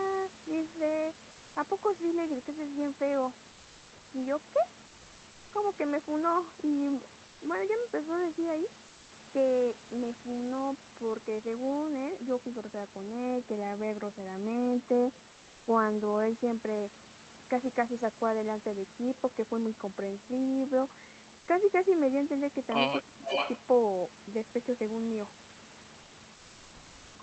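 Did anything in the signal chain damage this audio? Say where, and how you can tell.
Yes. In the gaps between phrases, the real room background is swapped for a steady, featureless hiss at 1.31, 3.51, 4.87, 7.27, 8.87, 15.31, 21.39 and 26.03 s, each lasting 80 to 640 ms and up to about 2 dB quieter. This is comfort noise in place of the background, likely from Opus discontinuous transmission in the call processing. Genuine room noise keeps its texture. These patches go smooth and uniform until the sound resumes.

From 23.06 to 23.33 s the talker's level collapses by roughly 40 dB in pieces, around a fifth of a second in total. This is speech suppressed in double talk, likely the echo canceller ducking everything while both ends spoke. It differs from a network dropout because the drop is a gain cut tied to the overlap, not a missing-packet gap.

Overlapping that, from 23.23 to 23.66 s, a delayed copy of the voice comes back about 0.44 s late and only about 5 dB under the direct sound. 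This is echo leak, likely loudspeaker pickup the canceller failed to remove. A room reflection would arrive within milliseconds, so this long delay marks it as an echo returned through the call.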